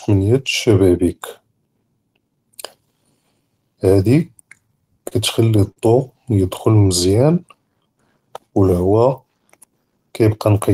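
Between 4.67 and 5.78 s, packets kept arriving too late for playback, so the jitter buffer drained six separate times. These repeated stalls (stutter) were bridged by stretching the last speech sound forward, about 118 ms in all and at most 52 ms at once, roughly 11% of that stretch. No speech is lost, but the flow catches and hesitates, giving a halting, stuttering drag to the phrase.

From 6.88 to 7.95 s, the jitter buffer was running short and the receiver set about refilling it, repeating single pitch periods and slivers of pause over and over. This jitter buffer slow-down added about 112 ms, so the speech plays at about 90% of its normal rate while the pitch stays put. Syllables sound drawn out and slightly sluggish.

Near the end, from 9.97 to 10.70 s, the buffer had built up more audio than its target, and the receiver trimmed short pieces of one or a few pitch periods in quick succession to bring the delay back down. 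This jitter buffer speed-up removed around 70 ms, pushing the speech to about 110% of its normal rate at an unchanged pitch, so the closing words come out noticeably hurried.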